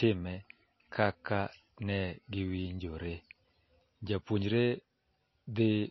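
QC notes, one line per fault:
Throughout, MP3 compression: speech band-limited with nothing above 5.8 kHz, watery swirling artefacts clearly audible, likely from a low bitrate around 24 kbps.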